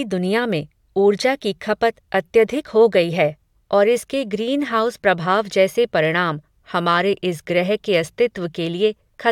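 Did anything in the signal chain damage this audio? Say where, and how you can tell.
No, nothing in the signal chain has left an audible mark on this speech recording. No stage between capture and playback shows any sign of damage.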